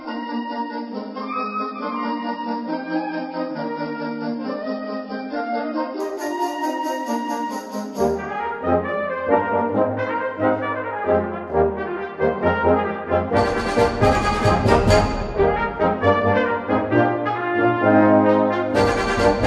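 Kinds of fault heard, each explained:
Adaptive stream starting at a low bitrate: for the first 6.0 s the sound is dull and smeared, with nothing above 5.5 kHz and stronger codec artefacts, then at 6.0 s it brightens abruptly with no gap or dropout. The player began on a low-bitrate rendition so playback could start quickly, which fits something near 16 kbit/s AAC, and switched once it had measured the connection, to a higher rendition consistent with roughly 96 kbit/s.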